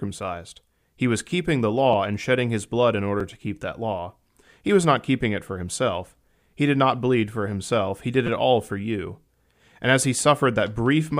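At 1.93 s, after "was keeping the", the speech hits a repeated buffer. A piece of about 5.8 ms plays twice, which fits a 256-sample buffer. Fresh audio came late, so the device replayed the last block. The hard joins make a short click. The same happens at 3.20 s, after "shedding his blood in". At 8.27 s, before "it all for you", the block plays four times. That gives a brief buzz. Nothing seems dropped.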